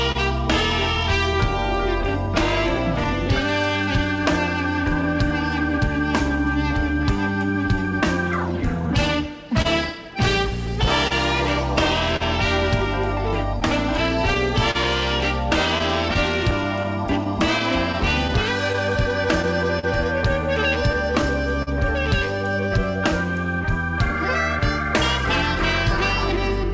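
Right at the start, from 0.12 to 0.17 s, the sound hangs for a moment, held on with a faint buzzy smear before it carries on without losing anything. This is a short stall from a late packet: the jitter buffer ran dry, so the receiver stretched the last bit of audio by 29 ms until the packet arrived. It then resumed from the same point, leaving the timeline 29 ms later than before.

From 0.95 s to 26.70 s the pacing feels faintly unsteady, with tiny hiccups that come at irregular spacing and leave the whole passage dragging very slightly. These are repeated timing corrections: the receiver keeps inserting small repeated slivers to stay in step, playing at about 99% speed. Across the stretch these slivers add up to a few tenths of a second of extra material, every edit pushing in the same direction.

Underlying those corrections, and running for the whole clip, is clock drift between sender and receiver. 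The sender's clock runs roughly three percent slow, so audio arrives a little too slowly and the jitter buffer keeps draining. The receiver answers by padding the stream again and again, which is why the small stretches and hiccups recur unevenly from start to finish rather than clustering in one place.

Between 9.62 s and 21.69 s the audio picks up brief ticks and little smeared moments, around twenty of them scattered through the span, the longest lasting about 40 ms. These are scattered short gaps, where individual packets went missing or arrived late and each hole was patched by extending the preceding sound. Together they cover a few percent of that stretch, with no content actually dropped. Over the whole clip the call path, which shows nothing above 8 kHz as fits a wideband G.722 link, limits the top end.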